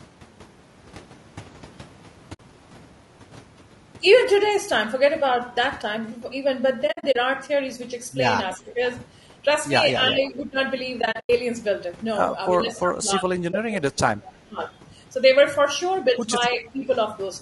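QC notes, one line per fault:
throughout, low-delay AAC compression: the whole clip has a rough, grainy edge, with noise filling the gaps between the pitch harmonics and a top end that sounds thin and a bit synthetic. That's likely AAC-ELD, the low-delay AAC used on video calls, running somewhere around 32 kbps. Its short frames can't pin down pitch harmonics well and they eat bits, so at that rate the damage is plainly audible the entire time.
2.33–2.40, 6.87–7.16, 11.01–11.30 and 13.51–13.54, AAC frame loss with muting: these are soft-edged holes rather than clicks. The decoder zeroed out the lost frames, and the overlapping windows fade out and back in. The first gap is about 60 ms and the last about 20 ms, which fits 20 ms frames. The middle two are patchier: about 160 ms of gaps spread over 280 ms with the longest run near 70 ms, then about 180 ms over 280 ms with the longest near 100 ms.
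8.57–8.80, 10.10–10.58, 12.56–14.60 and 16.58–16.84, speech suppressed in double talk: the speech dips in level while the far side is talking. The likely cause is that the echo canceller couldn't separate its own talker from the loudspeaker echo, so it turned both down. The short ones drop by about 10 dB over roughly 0.2 s and 0.4 s. The long stretch is the worst, falling about 20 dB and affecting roughly 1.5 s of it.
14.69–14.73, echo leak: there's a brief, faint scrap of a delayed copy of the speech, sitting roughly 336 ms behind and about 35 dB under the main level. The likely cause is a far end on loudspeaker whose echo canceller let a bit of its mic pickup slip back into the call. It's very quiet and short, just right after that long suppressed stretch.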